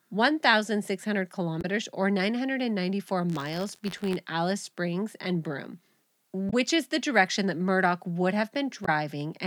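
At 1.61 to 1.65 s there is a short glitch, caused by damaged data in a compressed stream. The decoder hits corrupted frames, loses sync and skips ahead to the next frame header. Unlike a continuous fault, it is a single isolated blip.

From 3.29 to 4.16 s the speech takes on a steady robotic buzz at about 86.1 Hz. This is buffer tearing, which fits a 512-sample buffer. The writer and reader of the buffer cross inside every period, so a small slice of each buffer, around one percent, holds audio from roughly 50 ms earlier, with hard joins on both sides. What separates it from stream damage is that the buzz repeats at the buffer rate and lasts as long as the speech does, instead of sounding once and ending with a skip.

The same brief glitch from damaged compressed data returns at 6.49 to 6.54 s and again at 8.84 to 8.89 s.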